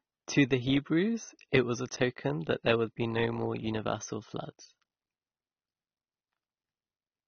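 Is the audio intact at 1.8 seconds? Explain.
No, at 1.8 seconds the speech carries AAC compression damage, which is present throughout the clip rather than at that instant alone. The cause is likely AAC-LC coding at a low bitrate, with the dullness pointing to about 24 kbps. Short of bits, the encoder drops everything above 6.4 kHz and quantises the remaining bands coarsely. The sibilants lose their edge and turn fizzy, and sustained sounds take on a plainly audible warbling, smeared texture.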